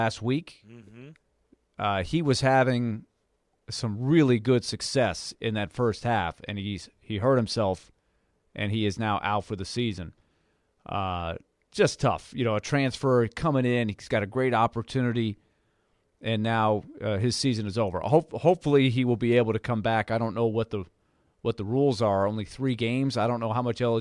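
Nothing in the audio stood out as a technical problem on listening.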